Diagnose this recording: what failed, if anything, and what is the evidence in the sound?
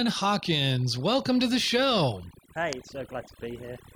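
The failure is overdone noise removal, at the call processing stage, and it runs through the whole speech clip. Between phrases the background drops to near silence, dotted with brief twinkling specks. The suppressor was set too aggressively for a noisy source. It pulls individual frequency bands down or out whenever they sit close to its noise estimate. Quieter parts of the voice fall below that line and are cut along with the noise.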